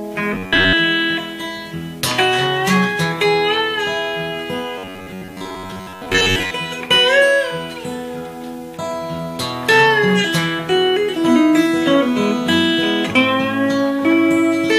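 From 0.33 to 0.74 s, and again from 4.78 to 6.53 s, the sound turns into a rigid metallic buzz pitched at 93.8 Hz: robotic sound from repeated short buffers. The likely cause is audio arriving too seldom, so a segment of about 10.7 ms is looped to fill the gaps, covering most of each stretch. Unlike a stutter or dropout, it is just one fixed buzz at that rate.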